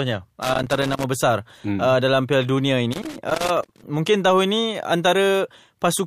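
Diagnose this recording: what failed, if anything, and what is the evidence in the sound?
Irregular bursts of crackle and scratching chop the speech from 0.42 to 1.04 s and 2.92 to 3.84 s: loose connector crackle in the analogue wiring, where a worn contact makes and breaks.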